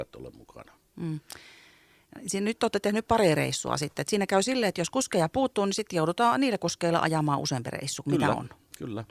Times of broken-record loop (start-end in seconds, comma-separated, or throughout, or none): none